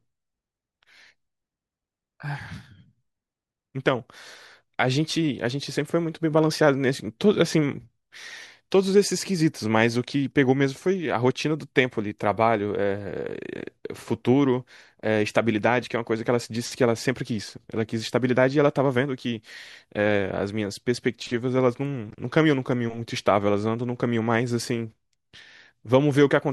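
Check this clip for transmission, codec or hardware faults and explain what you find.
Nothing stood out on listening to this speech recording.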